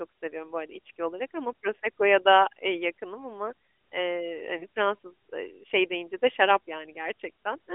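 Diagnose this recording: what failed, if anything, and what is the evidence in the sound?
At the network stage, radio errors corrupted speech data on the mobile link, and the AMR decoder had to conceal the damaged frame. Just after "eee yakınım ama eee", from 4.58 to 4.64 s, there is a brief dip or warble as the decoder repeats the last good pitch and vocal-tract settings at reduced gain. The short, isolated blemish points to a single lost 20 ms frame, and the narrowband AMR coding around it stays confined to roughly 250 Hz to 3.5 kHz.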